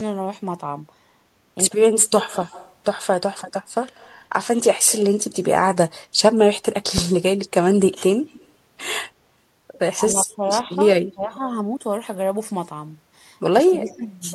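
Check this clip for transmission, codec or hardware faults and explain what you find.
The clip has three kinds of fault: speech dropouts during overlap, a delayed echo, and a low thump.

Speech suppressed in double talk, at 1.55–3.51 s, 9.96–11.23 s and 13.54–14.01 s: the voice dips or cuts out in pieces. It falls by about 35 dB in the first stretch and by roughly 20 dB and 15 dB later. The likely cause is an echo canceller that couldn't separate this talker from the far side and turned both down.

Echo leak, at 2.31–4.93 s, 8.27–8.49 s, 10.32–11.3 s and 13.89–14.09 s: a faint copy of the voice trails it by 110 ms, about 25 to 35 dB below the speech. It likely comes from a loudspeaker echo that the far end's canceller didn't fully remove, so it was sent back.

Phantom power thump, at 6.98–7.22 s: a deep thump decays in about 53 ms. A supply switched on a live input sends a voltage step through the coupling capacitors, and that step is heard as a single low-frequency bump.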